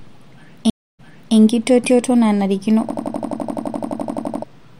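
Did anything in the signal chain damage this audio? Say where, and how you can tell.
Yes, in two places. At the playback and network stage, a stream reconnect runs from 0.70 to 1.36 s. The speech drops out for 288 ms, then resumes 372 ms earlier than where it stopped, so a fragment is heard twice. That is a broken connection, a fresh decoder, and the server resending a burst. A spectrogram shows an empty vertical band, then a block of harmonics matching the stretch just before it.

At the driver and buffer stage, a system hang loop runs from 2.90 to 4.44 s. One 85 ms slice repeats 18 times at 11.7 Hz, giving a machine-gun stutter. This is the sound hardware cycling through the same ring buffer while the system is frozen, and the loop length fits a 4096-sample buffer. About a second and a half of speech is lost. The waveform shows identical blocks tiled end to end, and the spectrogram shows evenly spaced vertical seams.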